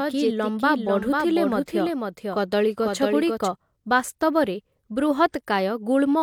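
From the very start until 3.48 s, the speech carries a doubled audio track: a second, full-band copy trails the original by roughly half a second, sitting about 5 dB lower. It has no reverberant tail or room colour, just a clean repeat, most likely from a slower capture path feeding the same signal back in. On a spectrogram, every syllable's pattern reappears intact and slightly fainter, shifted right; at 3.48 s the copy cuts off abruptly.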